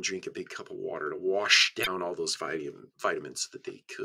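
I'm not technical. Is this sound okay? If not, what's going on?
No. There is one short glitch, from about 1.82 to 1.88 seconds. It is a brief chirp or blip that doesn't belong in the sound. This is damaged data in a compressed stream. Part of the compressed file was wrong at that spot. Some bytes were lost, zeroed, overwritten or mixed with other data. The player couldn't read that piece properly. It lost its place and had to find the next good section. That stumble is the blip you hear.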